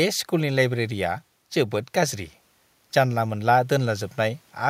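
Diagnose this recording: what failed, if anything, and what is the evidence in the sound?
Nothing in the signal chain failed: the speech plays with no audible disturbance from any stage between capture and playback.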